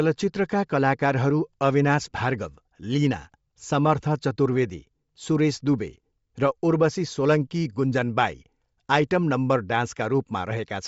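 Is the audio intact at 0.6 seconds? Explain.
No, Bluetooth LC3 compression damage is present at 0.6 s and runs through the whole clip. The speech has a plainly audible breathy, grainy edge, likely from the LC3 transform codec. At this rate the codec discards much of the upper spectrum and fills the gaps with shaped noise, so the highs sound hissy rather than detailed. The artefacts point to roughly 32 kbps with 10 ms frames.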